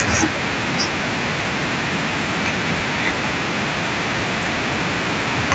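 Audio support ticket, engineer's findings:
Nothing stood out on listening; the speech comes through the call path with its top end ending around 8 kHz, as that path normally delivers it.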